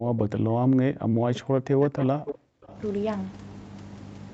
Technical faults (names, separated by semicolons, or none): speech suppressed in double talk; echo leak